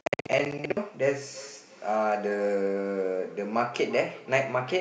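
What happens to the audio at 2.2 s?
A second device in the room is on the same call and is playing back what this microphone sent, and the microphone picks it up again, so there is feedback echo between two devices at 2.2 s. The loop runs from 1.2 s to the end of the clip. Each word returns about every third of a second, thinner and more ringing each pass, peaking at about 18 dB below the speech.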